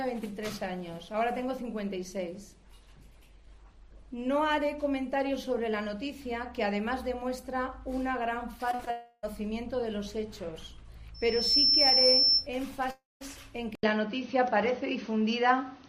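Three short gaps of concealed packet loss cluster at 8.71 to 8.75 s, 8.75 to 8.81 s and 8.85 to 8.89 s. Each is a brief smear or wobble where the receiver stretched the last sound over a few hundredths of a second. From 8.91 to 9.25 s the sound is carried on as a fading buzz or hiss for about 0.32 s, and the real audio returns with that part missing. At 12.91 to 13.23 s a second gap has the same fading fill, followed by about 180 ms of silence. Both gaps likely come from a long network dropout. From 11.14 to 12.47 s a loudspeaker feedback squeal builds at 5.3 kHz over roughly 0.4 s and peaks about 10 dB above the audio. The microphone is hearing its own loudspeaker, and the loop gain at that frequency exceeds one. At 13.75 s an 80 ms silence comes before the sound turns duller for the rest of the clip. Nothing above 6.3 kHz remains, the level shifts by about 5 dB, and a new noise floor sits roughly 40 dB below the signal. 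This is likely the input switching to a poorer device.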